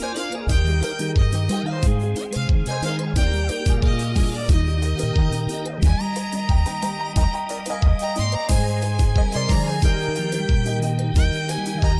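No technical faults can be heard anywhere in this recording.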